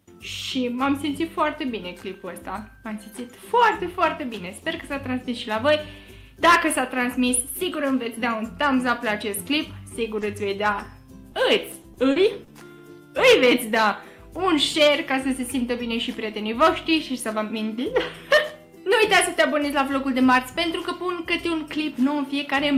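Short concealed packet loss appears at 10.19 s, lasting to 10.23 s. About 20 ms of audio never reached the decoder in time, and the receiver bridged the hole by extending the preceding sound before crossfading back into the real signal. It comes across as a brief smear or wobble rather than a clean gap.

Overlapping that same moment, from 10.21 to 10.23 s, is a lost packet rebuilt from error correction. Here the following packet carried a low-bitrate backup copy, so 20 ms were reconstructed from it instead of invented. That short frame sounds rougher and noisier than its neighbours.

A second short concealed packet loss follows at 11.32 to 11.36 s. Again 20 ms went missing and were patched by continuing the last sound, giving another quick wobble.

Repeated packet loss (robotic sound) then runs from 11.72 to 12.80 s. Four separate gaps land in quick succession, totalling 120 ms of concealed audio, about 11% of the stretch, with the longest hole at 40 ms. 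Some of the missing material was recovered from error-correction copies. Each patch is followed closely by the next, so the passage turns choppy, with small pieces dropping out.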